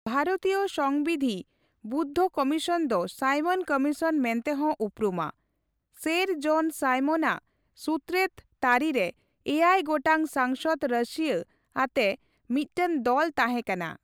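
No technical faults can be heard anywhere in the speech.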